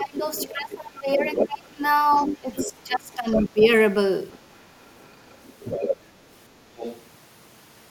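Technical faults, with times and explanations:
0.00 to 3.63 s: speech suppressed in double talk. While both ends are talking, the near talker's level drops in patches, by roughly 20 dB at its deepest, and about two seconds of this stretch sound ducked or broken up. The likely cause is an echo canceller that cannot tell the local voice from the loudspeaker echo arriving at the same moment, so it applies heavy suppression to everything and takes the wanted speech down with the echo.
0.00 to 3.65 s, 4.31 to 6.04 s and 6.76 to 7.02 s: other side's voice leaking through. A second voice sits under the talker, about 10 dB below the speech in the first two stretches and about 15 dB below in the short one near 7 s. It is likely loudspeaker playback of the far end reaching the microphone and left behind by an echo canceller that did not fully converge, so part of the far talker survives.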